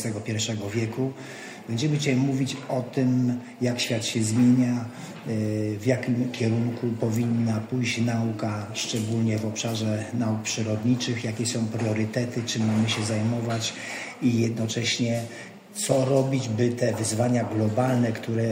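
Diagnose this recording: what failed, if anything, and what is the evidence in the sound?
No technical fault is audible.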